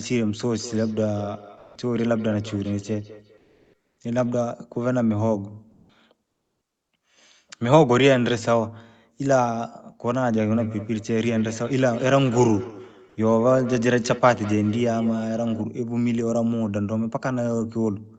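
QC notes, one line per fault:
0.54–4.38 s and 10.52–15.68 s, feedback echo between two devices: each phrase returns roughly every fifth of a second as a thin, ringing copy, peaking at about 18 dB below the speech in the first stretch and about 15 dB below in the second. A second device in the same room is playing this call aloud, and its sound re-enters the sending microphone. That microphone's echo canceller only removes its own playback, so the repeat passes through untouched.
1.57 s, sound dropped by the voice detector: about 180 ms of audio is replaced by steady noise or near silence, and roughly 150 ms of real sound within that stretch disappears before the signal resumes. The sending side's voice detector likely judged this passage to be background and stopped transmitting, which is Opus DTX behaviour. The receiver filled the gap with generated noise until the detector triggered again.
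3.37–3.97 s and 5.71 s, comfort noise in place of the background: the real room background, sitting about 52 dB and 42 dB below the loudest speech, gives way to a smooth, featureless hiss for about 600 ms and then for about 180 ms. The level shifts by about 6 dB and about 5 dB at these points. Transmission likely paused under Opus DTX in the gaps between speech, and the receiver synthesised noise roughly shaped like the background. That noise lacks the detail of the real background and lives within the call's 8 kHz band.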